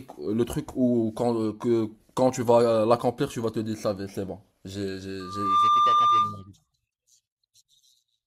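Loudspeaker feedback squeal runs from 5.20 to 6.49 s. The microphone is picking up the loudspeaker it drives, and around 1.2 kHz the gain around that loop rises above unity, so that one frequency feeds itself and grows. It swells from nothing into a steady whistle in under half a second and then sits about 5 dB above the speech until it stops.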